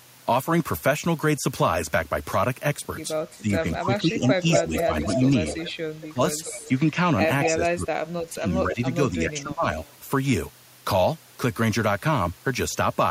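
From 3.36 to 5.42 s the speech dips by up to about 10 dB for roughly a second in total, likely speech suppressed in double talk: with both sides talking, the echo canceller turned the talker down along with the echo. Overlapping it, from 4.51 to 6.69 s, an echo leak returns a delayed copy of the voice 235 ms late and only about 5 dB below it. Unlike the dips, this is a repeat, not a loss. Suppression returns at 6.09–6.82 s, up to about 15 dB. A short echo scrap follows at 7.43–7.52 s. The deepest cut-outs, up to about 30 dB, come between 7.5 and 9.66 s. A faint echo about 35 dB down, 249 ms late, appears at 9.85–9.93 s.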